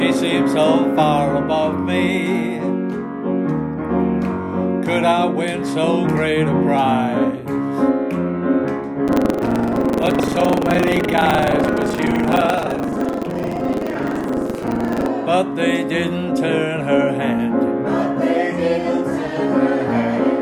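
From 9.05 to 15.06 s there's buffer tearing: writer and hardware reader have drifted into each other, so about a fifth of every period replays audio roughly 150 ms stale, hard-spliced both ends. You hear a steady 23.4 Hz robotic rattle, which fits a 2048-sample buffer.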